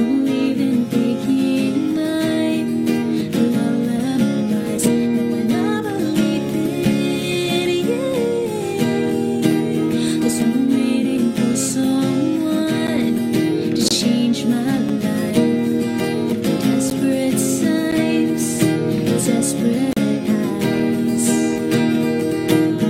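Gaps between stream segments cut hard-edged silences at 12.87, 13.88–13.91, 14.89, 16.90, 17.91 and 19.93–19.97 s. They fall on 1-second segment boundaries, where timestamps leave holes of 6 to 38 ms.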